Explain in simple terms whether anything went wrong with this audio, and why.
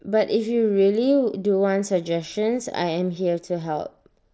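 Nothing went wrong here: listening to this speech, which comes over an ordinary Bluetooth headset link using the mSBC codec, nothing stood out as a problem.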